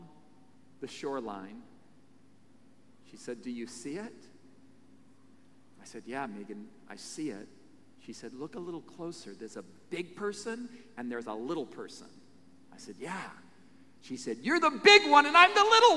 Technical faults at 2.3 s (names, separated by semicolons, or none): none